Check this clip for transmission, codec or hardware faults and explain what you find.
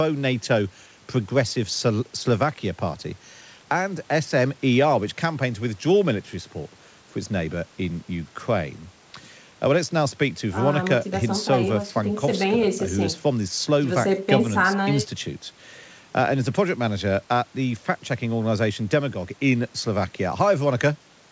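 No transmission, codec or hardware faults.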